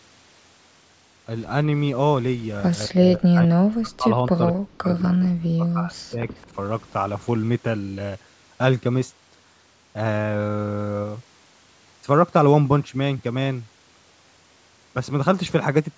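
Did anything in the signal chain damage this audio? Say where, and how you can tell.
Yes, in call processing. Between 2.86–4.08 s and 4.28–6.29 s the speech is suppressed in double talk, dropping about 40 dB in chunks. This is likely the echo canceller. The waveform shows ragged holes.

From 6.36 to 6.47 s a very faint copy of the speech returns 213 ms late. This is likely echo leak, visible on a spectrogram as a weak shifted repeat.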